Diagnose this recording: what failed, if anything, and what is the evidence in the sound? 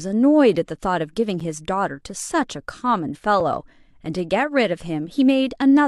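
Playback-side gap between stream segments: short hard-edged silences at 1.40 s and 3.40 s, roughly 9 ms and 4 ms long. They're two seconds apart, matching the 2 s segment length. Timestamps between neighbouring segments didn't butt up, so the player padded the hole with silence. None of the speech is actually lost.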